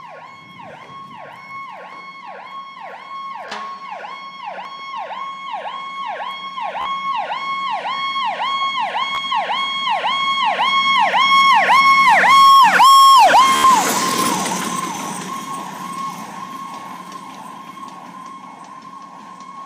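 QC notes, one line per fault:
3.49 s, 6.81 s, 9.15 s and 13.56 to 13.64 s: Bluetooth stutter. Packets arrived late or were lost, so the receiver replayed its last buffer for about 27, 40, 27 and 80 ms, heard as a repeated slice. The 80 ms gap forms the longest buzz. The sound then resumes further on, having skipped the lost span.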